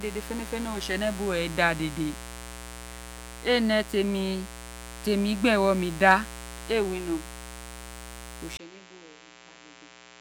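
Switching spikes leak into the signal path throughout, causing mains buzz: a steady, raspy 60 Hz buzz and harmonics, roughly 15 dB below the speech. At 8.57 s the input likely switched to a poorer device. After a 20 ms gap, the speech drops roughly 10 dB, loses everything above 7.6 kHz, and turns dull over faint new background noise.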